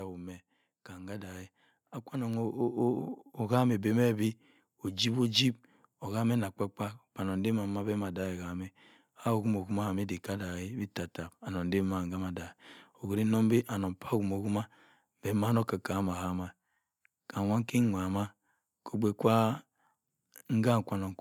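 Automatic gain rising runs from 0.88 to 5.11 s: the gain control judged the input too quiet and raised its gain by about 8 dB over those four seconds. The speech and the background noise swell together in a slow, steady climb.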